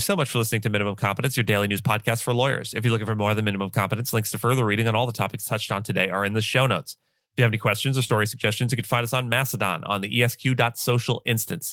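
At 8.07 to 8.11 s there is a short concealed packet loss. About 20 ms of the speech arrived too late for the decoder and was never played. The receiver covered the gap with 20 ms of made-up signal. It extended the last sound, following its pitch if voiced or using shaped noise if not. Then it blended back into the real audio. The result is a brief smear or wobble, and a short consonant may go missing.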